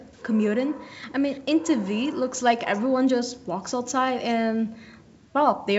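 Faint, delayed copies of the speech surface twice early on, from 0.13 to 0.23 s and from 1.32 to 1.40 s. Each is a short scrap trailing the original by about 0.4 s. The first sits very low, about 40 dB under the speech, and the second is somewhat clearer, about 30 dB under. This is an echo leak, likely from a far end playing the call over a loudspeaker whose echo canceller let part of the pickup return down the line.

From 3.81 s to the end at about 5.8 s, a fine hiss or graininess rides on the speech. It swells on louder, brighter sounds and drops away in the gaps. That behaviour points to sample clock jitter: the converter's timing wanders by about 0.7 microseconds, so samples land slightly early or late. The error scales with how fast the waveform is changing and sits roughly 45 dB below the signal, a level that fits the faint hiss.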